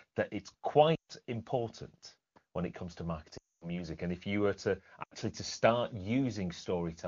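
Speech with lost AMR speech frames at 0.95, 3.37 and 5.03 s, lasting about 0.14, 0.24 and 0.08 s. The decoder stretches the last good frame with falling gain, so sound smears and fades rather than cutting to hard silence like a dropout.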